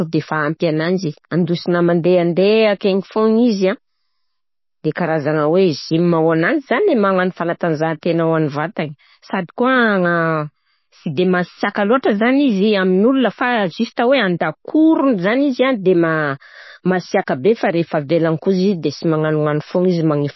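Speech throughout carries plainly audible MP3 compression, likely from a low-bitrate encode, with the damage pointing to roughly 24 kbps. The treble stops at 5.8 kHz, a flat ceiling on a spectrogram, and weak components flicker in and out between frames, leaving the sound watery and swirly. Pre-echo appears from 11.99 to 12.03 s, a 47 ms smear of hiss ahead of a sharp attack, and again briefly at 13.97 s, spreading about 10 ms. On the waveform, noise rises just before each onset, and on a spectrogram it shows as a broadband haze leading the transient, blurring its edge.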